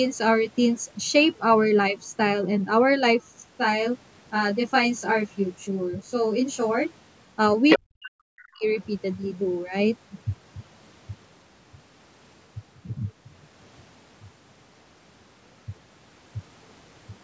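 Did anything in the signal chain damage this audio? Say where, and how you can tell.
Yes. From 3.35 to 7.14 s the speech turns rough and slightly doubled, which is channel delay (comb filtering). One channel runs about 20 ms behind the other, and summing them to mono cancels shared content at evenly spaced frequencies. The first notch sits around 30 Hz and the rest repeat at roughly 50 Hz intervals. The fault lies at the driver or buffer stage. Unlike reverberation, the notches stay fixed and there is no decaying tail.

The other side's voice leaking through appears twice, in the call-processing stage. From 7.69 to 7.79 s a brief scrap of a second voice arrives at about the same level as the main speech. At 8.43 to 8.48 s a fainter fragment comes through, about 30 dB down. These are short bursts of a different talker in the mix, not a delayed copy of the main speech. That points to residual loudspeaker echo the canceller failed to remove, rather than electrical crosstalk, which would sit steadily underneath.

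Between 7.77 and 8.65 s the main speech is pumped down in pieces, dipping by as much as about 40 dB over roughly 0.7 s in total. This is speech suppressed in double talk, likely the echo canceller turning everything down when both sides spoke at once. The level is ridden downward. That separates it from a network dropout, which leaves an abrupt hole with no relation to the other talker.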